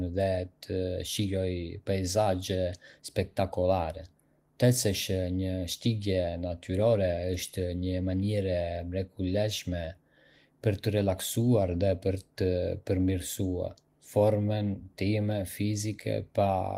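No technical faults can be heard anywhere in the speech recording.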